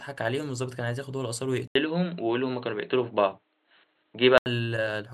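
At 1.67 s the speech drops out for about 80 ms and comes back dull and boxy, with nothing above 4.2 kHz, a noticeable jump in level and a faint new noise floor well under the voice. That's the signature of an input switched to a poorer device, likely the system hopping to another mic or a headset's call profile mid-recording. At 4.46 s the fuller sound returns.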